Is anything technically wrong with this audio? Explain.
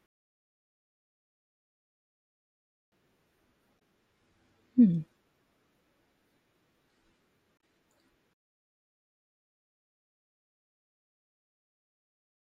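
Yes. Damaged data in a compressed stream shows up twice in this speech, at 3.76 to 3.81 s and 7.57 to 7.60 s. Corrupted bytes make the decoder misread the frames and lose sync until it finds the next header. Each event is a brief glitch.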